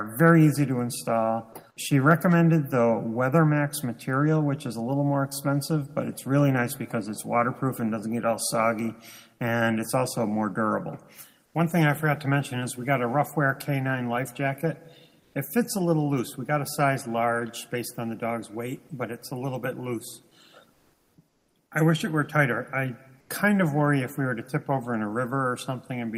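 Comfort noise in place of the background appears in five short pauses: at 11.45–11.54 s (90 ms), 15.20–15.34 s (140 ms), 20.73–21.17 s (440 ms), 21.28–21.55 s (270 ms) and 23.20–23.29 s (90 ms). In each gap the real background, sitting roughly 40 dB below the loudest sound, gives way to a flat, textureless hiss, mostly about 1 to 5 dB quieter, though slightly louder at 15.2 s. The likely cause is Opus discontinuous transmission, with the receiver synthesising noise while the sender pauses.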